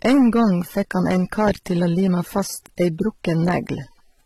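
A speech clip with two faults running throughout. The first is hard clipping. The level is driven about 10 dB past what the signal path can pass, so the loudest peaks are sliced flat. Only a few percent of the waveform is over the limit, but those flattened tops add high harmonics. The result is a harsh crackle and fuzz riding on the loud peaks. The second fault sounds like stacked codec damage. Different codec artefacts all appear together, and nothing is present above 16.1 kHz. This is likely transcoding between lossy codecs. The mix of artefacts points to a low-rate AAC-LC encode, around 27 kbit/s, that was later re-encoded as HE-AAC at about 32 kbit/s. The second encoder spent its bits reproducing the first one's errors and added its own, and the lower bandwidth limit from the chain remains.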